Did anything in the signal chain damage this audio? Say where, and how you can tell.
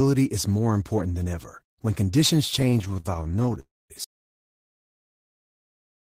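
Yes. Between 2.59 and 3.58 s the network path delivered packets late or too slowly, and the jitter buffer ran dry 26 times. The result is repeated stalls (stutter): each gap, none longer than 36 ms, was patched by continuing the preceding sound, adding about 0.3 s of filler across the span, roughly a third of it. Nothing is lost, but the speech drags and judders through that stretch.

From 3.60 to 3.92 s there is a call audio freeze, likely a packet delay in the network that left the jitter buffer empty for about 0.3 s. The receiver carried the last sound forward, and it faded until the final 220 ms were silent. When packets resumed, speech picked up where it had stopped, so the delivery is now about 0.3 s later, with a pause inserted but nothing removed.

At 4.04 s the clip hits an audio dropout to silence that lasts to the end. The input feeding the recorder or encoder was cut off, likely through a disconnected device, a failed link or an unintended mute, while writing continued. 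The speech stops mid-flow, and the gap holds no room tone at all, just dead silence. Whatever was said after that point is gone.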